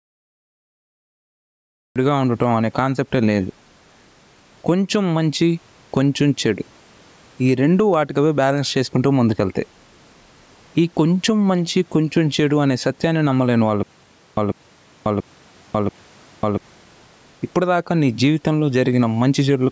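The clip opens on digital silence and then jumps straight into speech mid-sound at about 1.96 s, with no natural attack: a classic cut-off start, where the recording began late.

Throughout there's gain pumping. The gain swings by something like 10 dB, ducking under each loud syllable, squashing the dynamics. That's likely the input gain set way too high with a fast limiter clamping down.

From 13.83 to 16.58 s there's a stutter with silent gaps. A 144 ms fragment repeats four times, each followed by about 540 ms of dead silence, giving a steady 690 ms cycle. The audio that belonged there is gone, likely because the stream stalled and replayed its last chunk on each retry.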